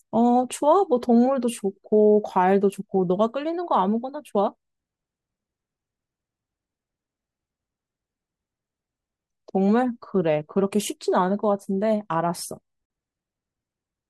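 At 12.86 to 12.90 s the speech drops into a brief 45 ms silence with smeared edges: a gap at a join of encoded pieces, where untrimmed encoder delay and padding remain.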